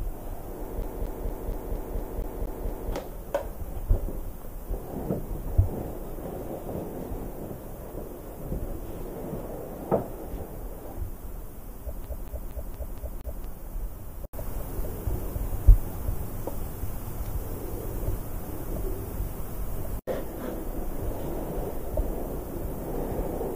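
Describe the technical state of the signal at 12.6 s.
A scratch on the disc is throwing the laser back one track on each turn, so from 12.04 to 13.44 s the player is a CD stuck on one turn. The same 0.23 s slice repeats six times, each jump marked by a brief mute, giving a fast, even stutter.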